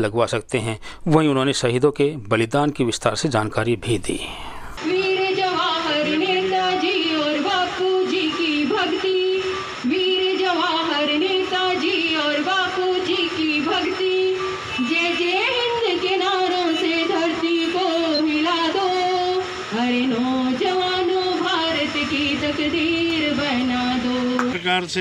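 At 4.58 to 4.61 s, 9.11 to 9.14 s, 13.85 to 13.90 s and 18.14 to 18.20 s there's a corrupt frame concealed each time. Damaged bits in the AAC stream got caught by the decoder, which papered over the bad stretch, either muting it or substituting a scrambled version of the last clean spectrum. Each concealed stretch lasts 30 to 60 ms, roughly a frame or two each.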